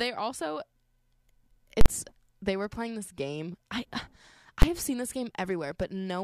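A calculation in the processing chain twice produced infinite or invalid numbers, which the output clamped to full scale. This is invalid numbers at full scale, in a speech recording. From 1.81 to 1.86 s the signal is pinned at its limit for about 46 ms, which fits a 2048-sample block, and is heard as a loud pop at each edge with silence between. At 4.62 s a shorter 12 ms block, consistent with 512 samples, collapses into a single bang.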